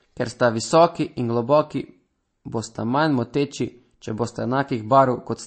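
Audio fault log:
Throughout, MP3 compression: the treble is chopped off above 8.3 kHz and artefacts are plainly audible, likely an encoder starved of bits, which fits about 35 kbps.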